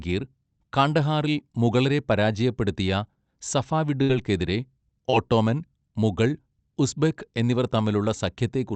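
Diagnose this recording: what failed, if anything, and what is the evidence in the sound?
Network stage, burst of packet loss: from 4.02 to 4.10 s the receiver held the last sound for about 66 ms and faded it, then jumped ahead with about 70 ms of speech missing. A spectrogram shows a frozen, darkening spectrum ending in an abrupt onset. The waveform shows the held sound decaying in level.

Network stage, short concealed packet loss: at 5.10–5.13 s and 8.04–8.06 s, brief holes were filled by continuing the preceding sound for about 22 ms and 10 ms, then blended back. The result is a quick smear or wobble. On a spectrogram each is a narrow blurred column. On the waveform each is a small kink at the join.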